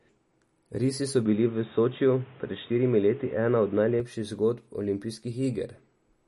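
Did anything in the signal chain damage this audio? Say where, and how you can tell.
Yes. The first fault sits at the codec stage and runs through the whole clip. Nothing reaches above about 11.5 kHz, and the speech has a plainly audible watery, swirly texture with metallic chirps on s sounds. This is likely MP3 compression at a bitrate around 40 kbps. Short of bits, the encoder cuts the treble at a fixed point. It also drops weak frequency lines, which flicker on and off between frames.

The second fault sits at the input device. From 1.26 s to 4.0 s the sound turns dull and boxy, with nothing above about 3.8 kHz. A new noise floor appears, about 30 dB below the speech. There is no silence at either switch, and the level stays the same. After 4.0 s the full band returns. This is likely an input switched to a poorer device, such as a headset's call profile. That device passes only a narrow band and brings its own noise.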